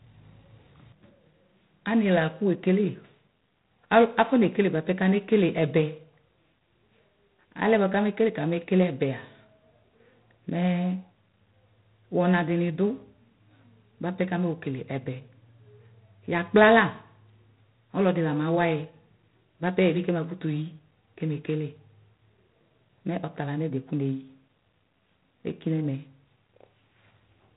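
Throughout, G.726 ADPCM coding stops everything above 3.8 kHz and adds a rasping hiss that follows the speech level, consistent with 24 kbit/s, unlike plain band-limiting's clean dullness.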